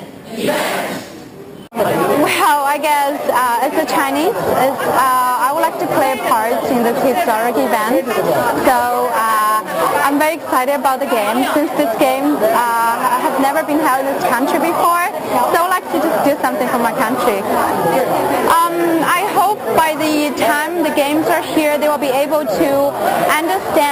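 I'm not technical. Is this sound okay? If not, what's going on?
No, not quite. All the way through there's a bright, metallic fizz riding on top of the sound. That's imaging from sample-and-hold upsampling: the audio was stretched to a higher rate by simply repeating each sample with no smoothing. That leaves jagged steps, and they create ghost copies of the sound up high, starting around 6 to 12 kHz. The pattern fits an original rate near 12 kHz. The fizz rises and falls with the sound itself.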